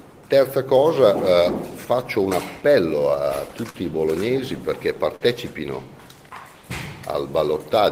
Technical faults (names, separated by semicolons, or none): short concealed packet loss